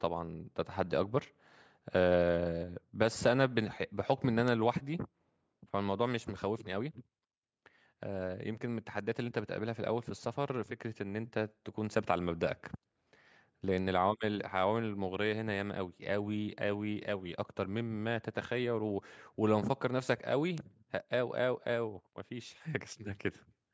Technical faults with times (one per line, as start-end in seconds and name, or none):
4.48 bit error spike
13.78 bit error spike
20.58 bit error spike